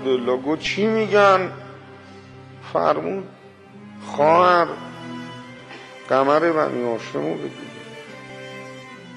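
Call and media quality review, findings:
Brief garbled glitch, 0.64 to 0.67 s, and the audio skips ahead. Likely a broken MP3 bit reservoir: after lost frames, the decoder pulls borrowed bits from the wrong frame. Duration fits one 26.1 ms frame.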